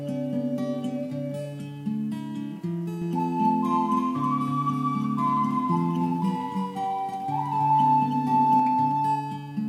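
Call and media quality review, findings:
Doubled audio track, 3.02–8.60 s. Likely cause: a second capture path, slower than the main one, mixed back into the output. A full-band copy of the same audio trails the original by around 300 ms at roughly 5 dB lower, with no decay or room colouring, giving a flat slapback repeat. The copy cuts in abruptly at 3.02 s and drops out just as sharply at 8.60 s.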